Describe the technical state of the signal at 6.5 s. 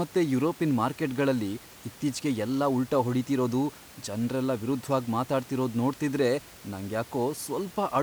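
At 6.5 s the signal is intact, with only the room's own background noise sitting about 22 dB below the speech.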